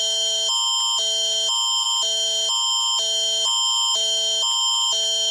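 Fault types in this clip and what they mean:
skip ahead: at 1.83 to 1.85 s about a second of audio vanishes and playback jumps straight on; a spectrogram shows an abrupt vertical seam with no gap.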